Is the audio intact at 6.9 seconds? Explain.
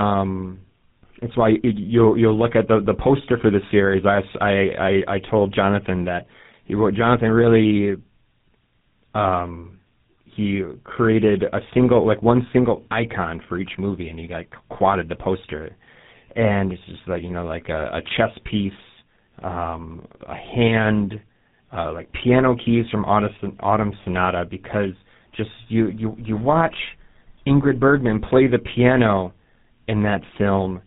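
No. At 6.9 s, as throughout the clip, the speech carries tandem speech coding, which points to two GSM full-rate passes joined by a G.711 A-law link. The second coder re-encodes the first's damage, so the speech sounds rougher and more warbly than one codec would, with nothing above 3.8 kHz.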